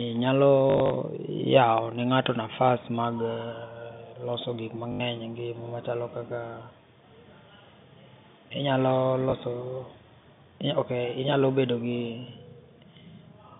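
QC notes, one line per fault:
0.7–0.9 s, 2.24–2.26 s, 4.92–5.0 s, 9.3–9.32 s: packet loss with last packet repeated. The receiver fills each gap by replaying the previous packet. The 0.7 s burst is scattered, with about 120 ms lost over 200 ms and a longest run of 60 ms. At 4.92 s there is an 80 ms run, and the other two are single 20 ms gaps. The longer runs add a robotic 50 Hz buzz, which fits 20 ms packets, all heard through an otherwise clean telephone-band line.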